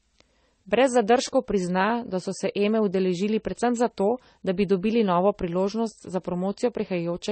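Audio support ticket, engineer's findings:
Transcoding between lossy codecs, throughout. Dull band-limited speech, nothing above 8.4 kHz, with swirly smearing and grainy artefacts layered together. Likely an MP3 encode re-encoded to AAC-LC, both passes consistent with roughly 32 kbit/s; second encoder spends bits on first's artefacts, adds its own.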